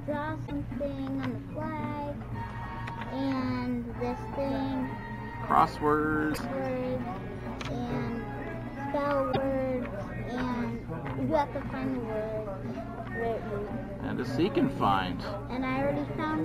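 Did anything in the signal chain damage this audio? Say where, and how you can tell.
Yes. Damaged data in a compressed stream shows up three times, at 0.43–0.51 s, 6.31–6.38 s and 9.29–9.37 s, each a burst of roughly 70–80 ms that breaks sharply from the surrounding sound. The fault sits at the codec stage: corrupted bytes in the encoded stream make the decoder misread those frames, lose sync and hunt for the next valid frame header, producing a short garbled blip before clean decoding resumes.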